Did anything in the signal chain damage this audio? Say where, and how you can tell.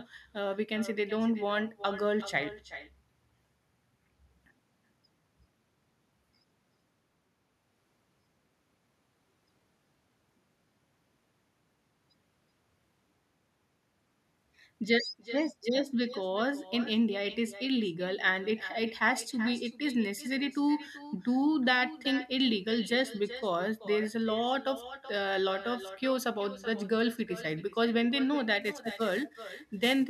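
Yes, two stages. In call processing, there's echo with no canceller running the whole clip: every phrase returns about 400 ms later, roughly 15 dB down and thinner. The far end's loudspeaker is leaking into its mic, and nothing's subtracting it.

Then at the converter, sample clock jitter shows up from 28.61 s to the end. A grainy hiss rides on the louder, brighter parts of the speech and drops away in the gaps, sitting around 20 dB below the signal. That points to timing wobble of roughly 10 microseconds.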